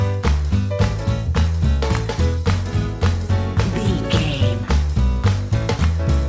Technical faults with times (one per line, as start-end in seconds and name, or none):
none